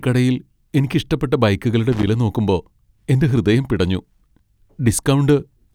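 From 1.92 to 2.07 s, just after "കടയിൽ എനിക്കിഷ്ടപ്പെട്ട ബൈക്കുകളുടെ", a loose connector crackle chops the speech: a worn contact makes and breaks, giving an irregular scratchy burst. Unlike evenly spaced digital clicks, its spacing is ragged and uneven.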